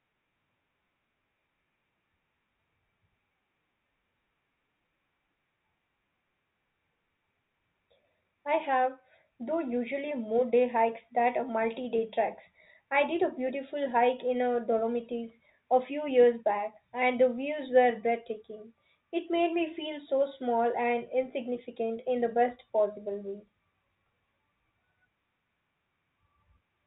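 Nothing stood out on listening to this speech clip, which comes through G.711 telephone coding with nothing above 3.8 kHz.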